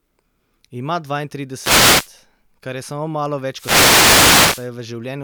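Twice the radio link of an analogue FM wireless microphone fades as reflected signals cancel, letting receiver noise rise: a wireless microphone noise hit. The first runs from 1.58 to 2.10 s, a short swish of static just before "kar je samo malo". The second, from 3.52 to 4.70 s, follows that phrase and lasts over a second, a longer burst of hiss.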